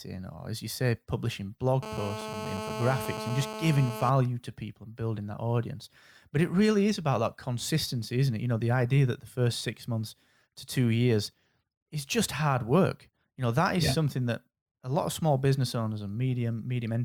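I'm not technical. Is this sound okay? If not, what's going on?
No. GSM phone buzz runs from 1.83 to 4.10 s, between "as you say publishing" and "to people and building": a nearby 2G phone on a call pulses its radio signal about 217 times a second, and the audio equipment picks it up as a harsh, raspy buzz. Sample clock jitter runs throughout: the recorder's internal clock wobbles slightly, so the speech is captured at slightly irregular moments, adding a faint hiss or roughness that grows on louder and brighter sounds.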